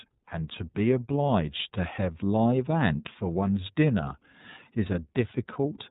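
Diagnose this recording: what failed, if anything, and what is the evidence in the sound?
The speech sounds boxed-in and slightly buzzy from start to finish. There is no energy above 3.8 kHz, and voiced passages have a rough, synthetic edge that is plainly audible. This is codec-stage damage from iLBC. The narrowband band limit removes the upper harmonics and sibilance. The roughness comes from coding each frame's excitation independently of the previous one. The texture points to 30 ms frames at about 13.33 kbps.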